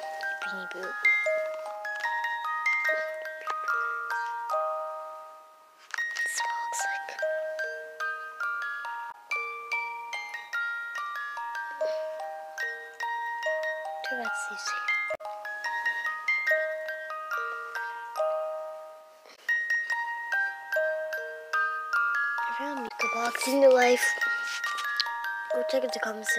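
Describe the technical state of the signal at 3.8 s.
At 3.8 s the audio is intact, with no dropout, click, distortion or other fault to be heard.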